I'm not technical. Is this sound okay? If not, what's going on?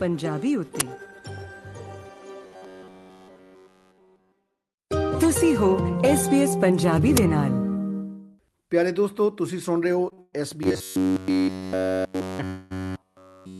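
No, there are a few problems.

At 0.80 s and again at 7.17 s there's a brief, harsh crackle of digital noise. That's an uninitialised buffer: a chunk of memory about 10 ms long got played before any real audio was written into it, so you hear leftover junk.

From 2.46 to 4.32 s, and again from 10.63 s to the end, the sound turns into a stiff, metallic buzz at about 94 Hz. That's robotic sound from repeated short buffers, likely caused by the software looping a tiny slice of about 11 ms over and over because fresh audio wasn't arriving in time.

At 10.09 s and 10.13 s the sound gets held a touch too long, for about 19 ms and then 42 ms. Each one is a short stall from a late packet. A piece of audio arrived late, so the last bit was stretched to cover the wait, and nothing was lost.

There are longer hang-ups from 10.22 to 10.35 s and from 12.47 to 12.73 s. These are call audio freezes, where the sound is stretched into a fading buzz or hiss, likely because network delays left the receiver waiting for audio. 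Playback then picks up where it stopped.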